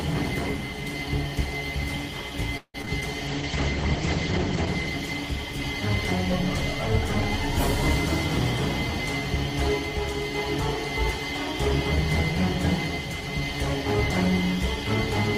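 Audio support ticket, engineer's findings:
Choppy, robotic sound with short holes, 2.57 to 3.03 s. Repeated packet loss, with the jitter buffer and concealment stage filling each hole by extending the previous sound. Nearly half the stretch is patched. The longest gap is about 166 ms. Some gaps go fully silent.

Rough, watery, dull sound from 3.29 to 6.19 s. Top end cut off around 8 kHz instead of reaching 20 kHz. Call bitrate drop in the encoder: the bandwidth estimate fell and Opus coded coarsely. The sound points to a drop from roughly 32 kbps to about 9 kbps, at its worst for about 1.1 s before recovering.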